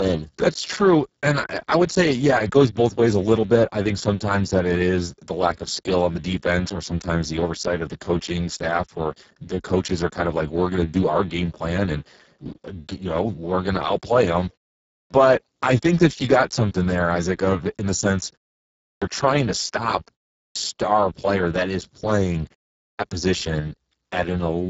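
From the start, the Speex codec at a very low setting, around 6 kbps, makes the speech hoarse and noisy, with nothing above 7.7 kHz and a noise-like upper band rather than simple muffling. Clipped start after a pause occurs at 14.95 s after "going to outplay them", 18.86 s before "trying to stop", 20.40 s before "player that is playing", and 22.82 s, each time swallowing about 0.16 s of onset as the output device wakes. Unlike muted pauses, which only drop background, these cut off speech.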